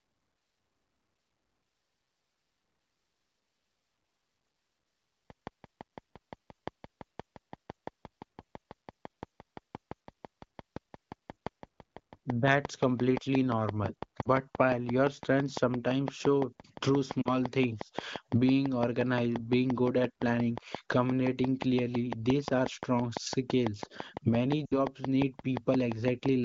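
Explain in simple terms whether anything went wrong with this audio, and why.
Yes, two things went wrong. The first is a train of clicks: from about 5.3 s right to the end at 26.3 s, there's a steady ticking over the speech, nearly six clicks a second, roughly 150 in all. They keep an even beat and carry on through the pauses too, so they're not part of the recording itself. The likely cause is electrical interference from nearby equipment or a faulty connection or power supply, pushing in the same little pulse again and again.

The second is lost AMR speech frames, which comes from the phone-call side of things. Three short gaps stand out: 14.21 to 14.29 s and 17.22 to 17.28 s, each about 40 ms, and 24.65 to 24.74 s, about 60 ms. Radio errors spoiled those bits of the call, so the decoder patched over them by repeating the last good sound while turning it down. Because this is wideband HD Voice, that patch fades fast, so the sound drops to near silence within a couple of frames, and the speech comes back a bit weak or rough for an instant.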